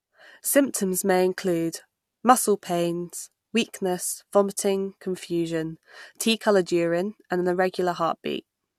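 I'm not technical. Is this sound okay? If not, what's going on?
Yes, nothing wrong can be heard in this recording.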